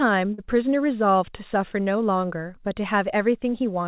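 At 0.34 to 0.40 s and again at 1.84 to 1.88 s there is short concealed packet loss: about 40 ms and then 20 ms of audio never arrived in time, and the receiver bridged each hole by extending the preceding sound before blending back. It is heard as a brief smear or wobble rather than silence, which separates it from a plain dropout or a click. The band-limited sound, with nothing above 4 kHz, fits a G.711 mu-law call path.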